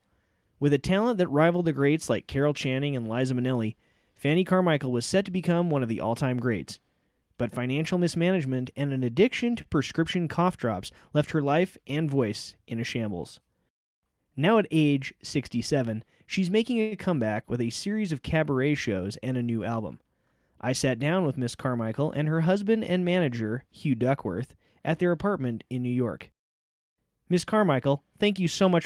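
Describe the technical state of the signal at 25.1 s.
At 25.1 s the speech signal is intact, with no technical fault present at that moment.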